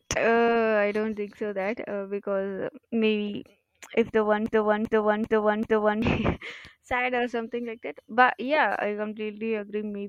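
Speech with a broken-record loop from 4.46 to 6.02 s: a 390 ms fragment repeats four times, likely from a stalled stream, showing as identical tiled blocks in the waveform.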